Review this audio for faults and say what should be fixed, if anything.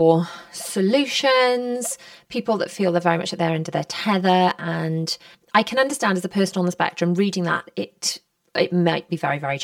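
Channel delay (comb filtering) runs throughout the speech, from start to finish. One channel arrives roughly 5 ms behind the other, and when the two are summed to mono, content common to both cancels at regularly spaced frequencies. The first notch sits around 100 Hz, with further notches repeating up the spectrum at a fixed spacing. This gives the voice a hollow, phasey character that never changes over the clip. To prevent it, time-align the channels, or use a single channel, before folding to mono.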